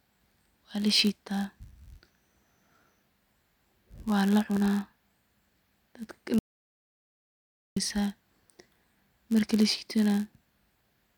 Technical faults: block size mismatch (padded); audio dropout to silence

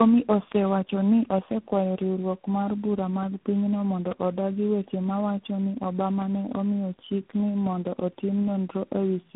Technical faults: tandem speech coding; bit error spike

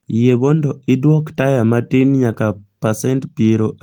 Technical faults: none

